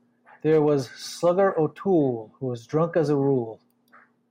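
No technical faults can be heard anywhere in this recording.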